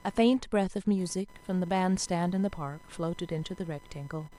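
From start to end, computer activity noise sits under the speech. It is a thin buzz near 1 kHz, about 30 dB below the voice. Processor or graphics load shifts the shared ground. The buzz follows the computer's activity, not the speech.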